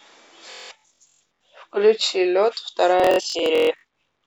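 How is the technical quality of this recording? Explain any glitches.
The recording's technical quality is poor in two places, both Bluetooth stutter, at 0.51–1.22 s and 3.00–3.84 s. Packets arrived late or not at all, so the receiver replayed its last brief slice on a loop, roughly half a second lost each time. The speech breaks into a rapid machine-gun buzz, the longest run about 0.19 s and 0.14 s, then jumps ahead. On a waveform this shows as identical short blocks repeating, and on a spectrogram as evenly spaced vertical striping.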